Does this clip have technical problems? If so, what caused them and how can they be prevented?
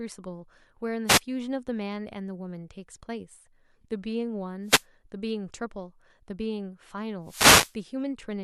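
Yes. The speech has three wireless microphone noise hits, at 1.07 to 1.20 s, 4.64 to 4.85 s and 7.23 to 7.76 s. Each is a short swish of static. The last is the longest, at about half a second. They come from an analogue FM radio link. Reflected signals arrive out of step and cancel the direct one. The received signal weakens, and receiver noise rises over the voice. Keeping a clear line of sight, using diversity receivers and moving the antennas closer prevents these dropouts.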